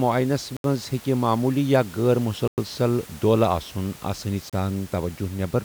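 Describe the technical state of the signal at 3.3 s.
At 3.3 s the speech is intact, with only the room's own background noise sitting about 22 dB below it.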